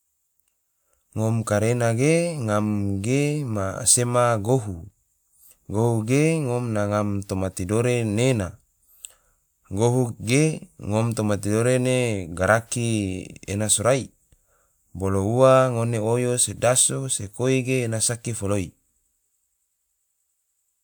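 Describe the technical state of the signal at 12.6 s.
At 12.6 s the audio is intact, with no dropout, distortion, glitch or other fault.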